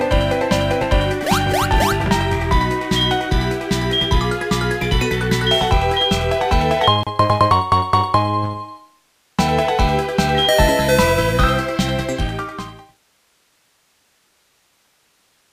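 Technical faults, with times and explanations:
Nothing stood out as a technical problem on listening, and the gentle fade-out toward the end, finishing at about 13.0 s, sounds like an ordinary deliberate edit.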